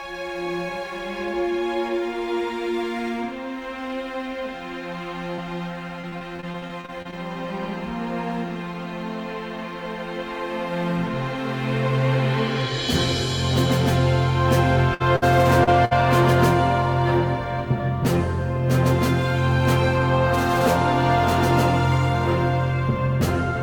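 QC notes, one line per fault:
5.35–5.48 s: short concealed packet loss. About 20 ms never arrived, so the last sound got stretched over the hole, a quick smear.
6.01–7.14 s: repeated packet loss (robotic sound). Twelve gaps, longest 28 ms, about a fifth of the stretch patched, so it goes choppy.
14.94–15.02, 15.16–15.24 and 15.85–15.93 s: burst of packet loss. Around 60 ms lost each time. The last sound is held and faded into a buzz or hiss, then the audio jumps ahead.
15.64–15.69 s: short concealed packet loss. Roughly 40 ms missing, filled by continuing the previous sound, giving a brief wobble between the bursts.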